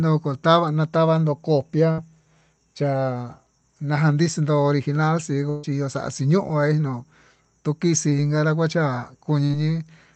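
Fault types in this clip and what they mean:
Burst of packet loss: Runs of lost audio were patched by stretching the last sound and fading it. At 1.91 s and 5.50 s, before "chiyo xaxhí", speech skips ahead.
Short concealed packet loss: Tiny gaps were filled from the preceding sound and blended back. Brief smears occur near 8.09 s, about 20 ms, and 9.45 s, about 40 ms.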